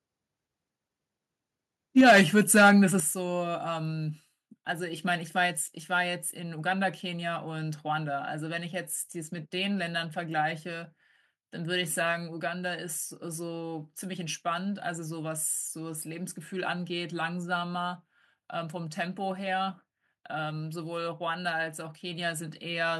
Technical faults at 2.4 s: microphone overload

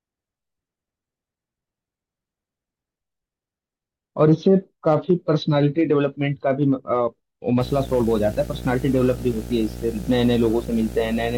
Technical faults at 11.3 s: video or display buzz

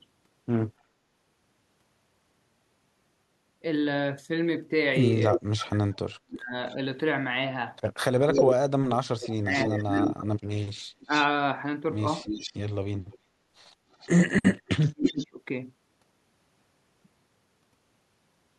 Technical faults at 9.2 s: speech suppressed in double talk; echo leak

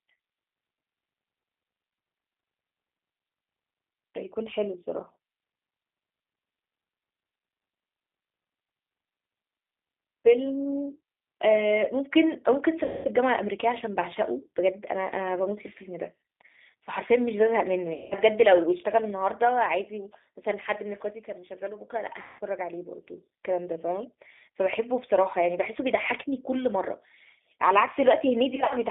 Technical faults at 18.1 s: G.729 codec; VoIP packet loss concealed by the speech codec

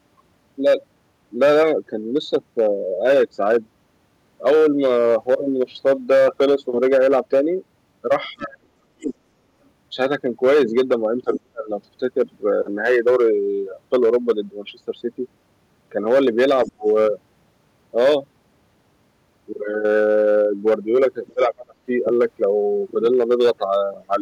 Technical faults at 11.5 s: hard clipping; speech suppressed in double talk

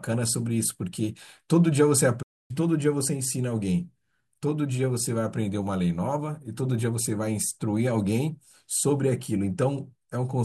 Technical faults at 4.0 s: none

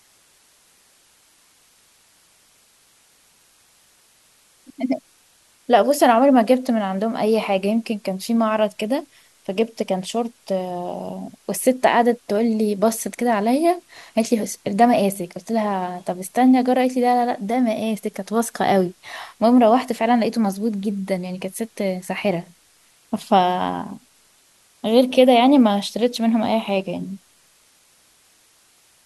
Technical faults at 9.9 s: low bit depth with dither

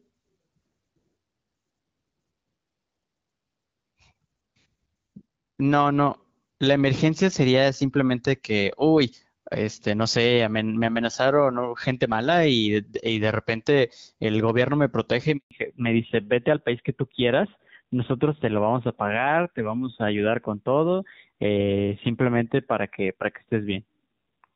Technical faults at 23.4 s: fallback to narrowband

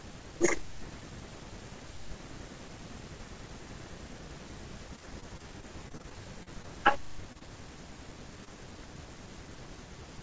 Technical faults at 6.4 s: repeated packet loss (robotic sound)

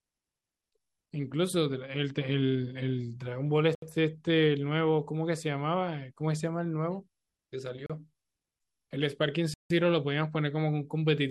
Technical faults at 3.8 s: Bluetooth stall

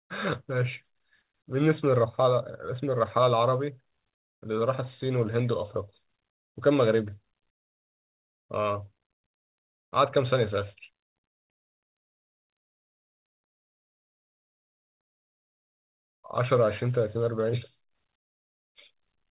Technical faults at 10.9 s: short concealed packet loss

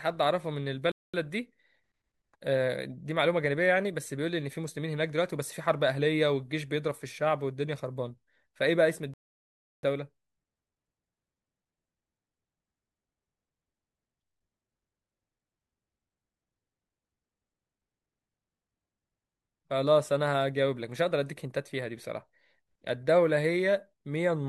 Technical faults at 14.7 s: none

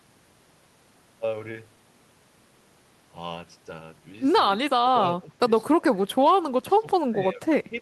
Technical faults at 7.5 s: speech suppressed in double talk

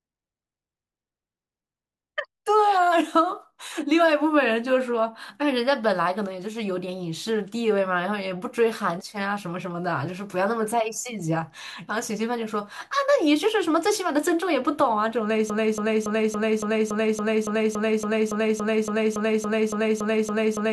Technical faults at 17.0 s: broken-record loop

